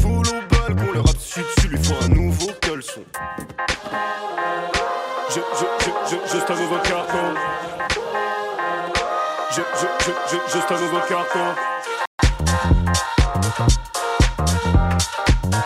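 The audio cuts to silence from 12.06 to 12.19 s, a gap of about 138 ms, before resuming. This is a playback stall, likely caused by the player's buffer running dry or its output thread being blocked long enough to starve the device. From 12.19 to 13.57 s the sound runs hurried at about 1.1 times normal speed while keeping its pitch. This is time-compressed catch-up: after the stall the player trims small segments and cross-fades across the joins to work off its backlog.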